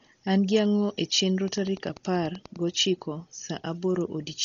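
From the start the speech sounds dull and rough, with nothing above 6.9 kHz and a fluttering noise around tones, likely heavy Dolby Digital compression at a very low bitrate, around 32 kbps. From 1.48 to 2.57 s a train of clicks ticks along at a steady 10.2 per second, about ten pulses, peaking a few dB above the speech, likely from interference or a faulty connection.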